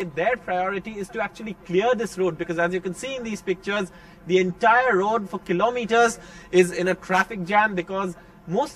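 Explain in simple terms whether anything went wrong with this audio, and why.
Channel delay (comb filtering) runs through the whole clip. One side arrives about 5 milliseconds late. When both sides are mixed together, the parts they share cancel at evenly spaced pitches, starting near 100 Hz, so the sound comes out hollow and phasey.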